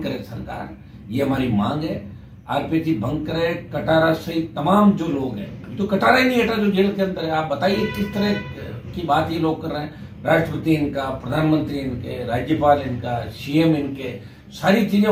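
No technical faults can be heard anywhere in the recording; the signal holds steady and continuous across its whole duration.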